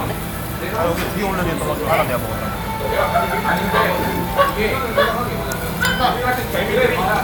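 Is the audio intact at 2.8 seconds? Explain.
Yes, the audio is intact at 2.8 seconds, with no dropout, click, distortion or other technical fault at that moment.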